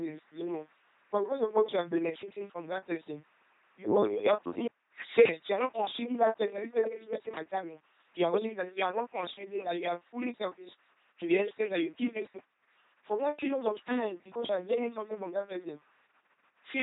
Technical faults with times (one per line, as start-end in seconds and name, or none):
0.00-16.83 LPC-10 vocoder